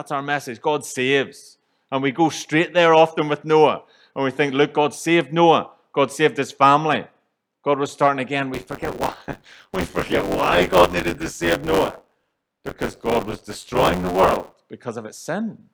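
From 8.53 s to 14.54 s the speech takes on a robotic, rattling buzz at about 94 Hz that follows the voice and falls away in the gaps. This is buffer tearing. The software filling the playback ring buffer and the hardware draining it have drifted out of step, so in every period roughly a third of the audio is stale material from around 20 ms earlier, butted against the current audio with hard joins. The buzz rate fits a 512-sample buffer.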